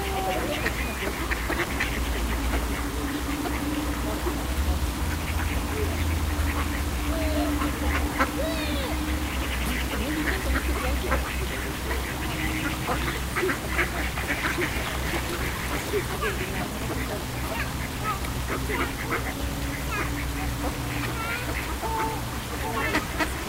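From start to finish the sound carries a grainy, gritty distortion that tracks the signal itself, with the error sitting roughly 15 dB below it. The likely cause is low bit depth without dither: the audio was rounded to about 5 bits.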